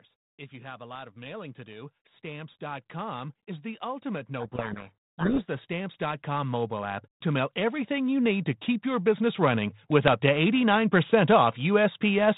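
From 0.5 s the automatic gain rising starts pulling the level up: the control decided the input was too quiet and kept adding gain until about 10.56 s, roughly 20 dB in all. Because it's a slow, steady climb, the speech and the room noise behind it swell together, so the background grows along with the talker instead of staying put.

Partway through that climb, from 4.4 s to about 5.48 s, there's a codec payload misread. The link is G.726 at 32 kbit/s, which sounds fine on its own with nothing above 4 kHz and only light coding roughness. Here, though, the two ends disagree on the bit order of the code words, so the decoder reconstructs the wrong differences from perfectly valid-looking data. For that second or so the speech is buried under harsh distortion, and it clears once both sides are reading the bits the same way again.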